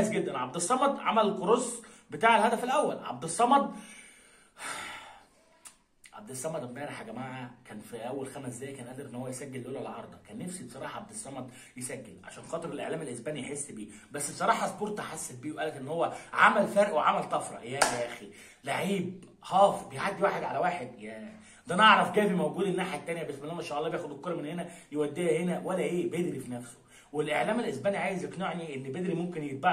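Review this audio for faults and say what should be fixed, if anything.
Nothing in this audio needs fixing, as no technical faults can be heard at any point. There is nothing to correct or guard against here.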